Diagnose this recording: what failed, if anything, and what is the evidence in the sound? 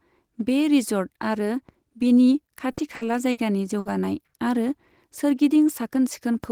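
The speech catches four times in quick succession, at 2.71 to 2.80 s right after "आरो बिनि", then 2.95 to 3.04 s, 3.31 to 3.40 s and 3.79 to 3.88 s. Each time the last sound is drawn out for about 60 ms as a fading buzz or hiss before the talker jumps ahead. This is burst of packet loss on the network. The receiver concealed each gap by extending and decaying the previous audio, and about 60 ms of real speech never arrived each time.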